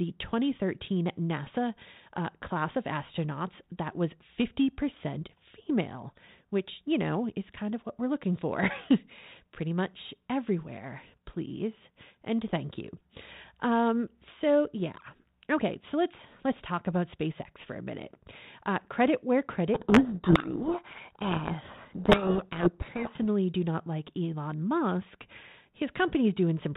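Speech coded as G.726, with the band-limiting of 32 kbit/s telephone audio. From 19.74 to 23.23 s, a codec payload misread buries the speech in harsh distortion. The decoder reads each G.726 code word with its bits in reversed order. The distortion stops once both sides agree again.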